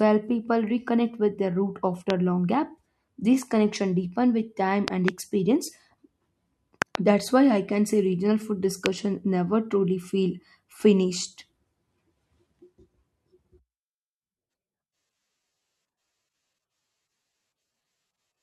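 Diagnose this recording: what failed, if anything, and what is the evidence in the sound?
Loud pops, likely voltage spikes from an analogue wiring or switch fault, added over speech that continues beneath: single pops at 2.10 s ("with their root") and 8.86 s, doubles at 4.88–5.10 s and 6.82–6.97 s. Each peaks about 20 dB above the speech and appears as sharp waveform spikes and thin broadband vertical spectrogram stripes.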